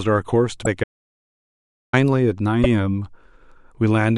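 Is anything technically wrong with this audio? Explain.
Yes. There are two kinds of fault in this speech recording.

Damaged data in a compressed stream appears at 0.62–0.67 s and again at 2.60–2.66 s. Corrupted bytes in the encoded frames there throw the decoder out of sync while it hunts for the next valid frame header. Each spot comes out as a brief glitch.

An audio dropout to silence runs from 0.84 s to 1.93 s. The input signal was likely lost while the encoder kept writing silence. The speech cuts off abruptly into total silence with no room tone, and about 1.09 s of it is missing before the sound resumes mid-flow.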